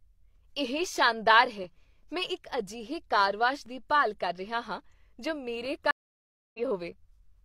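Just after "ਸ਼ਾਨਦਾਰ ਹੈ", from 1.64 s to 5.65 s, periodic USB or driver dropouts break into the speech about three times, every 2.0 s. Each time a background task briefly stalls the audio path, and a tiny slice of sound, a couple of milliseconds, is lost and replaced by silence. Each loss is heard as a small tick. The strict 2-second spacing, and the fact that the ticks sit only within the speech, set this apart from random clicks or crackle from a bad cable.

At 5.91 s a stream reconnect follows. The audio goes silent for 633 ms while the player drops the connection, reconnects and starts a fresh decoder, and playback resumes at 6.60 s. When the speech returns it has jumped ahead by roughly 0.4 s, so part of the stream is simply gone. The long gap and the skip in content distinguish it from the brief, regular dropouts earlier.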